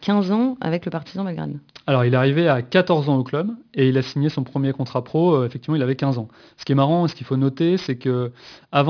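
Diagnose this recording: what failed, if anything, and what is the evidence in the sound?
What failed is the sample-rate conversion step, and the fault is aliasing across the whole clip. The speech has a gritty, metallic edge on the sibilants, and the spectrum runs hard right up to about 5.5 kHz with no roll-off. That fits a downsample from 48 kHz to 11 kHz done without an anti-alias filter. Everything above 5.5 kHz folded back into the band as unrelated tones, sitting roughly 25 dB under the speech.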